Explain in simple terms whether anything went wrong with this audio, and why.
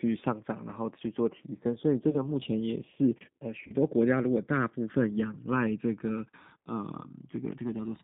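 The speech was squeezed through a low-rate phone-call codec, G.729, which rebuilds the voice from a rough model of the mouth and pitch instead of sending the real sound. Everything above about 3.7 kHz is gone, so the voice sounds thin, slightly rough and a little synthetic throughout.

VoIP packet loss, concealed by the speech codec, also occurs twice: from 2.10 to 2.25 s and from 3.67 to 3.74 s. Each time, about 30 ms of audio never arrived, which fits one lost packet. The decoder filled the gap by stretching the last sound into a fading buzz or noise, and the voice stays weak or smeared briefly afterwards.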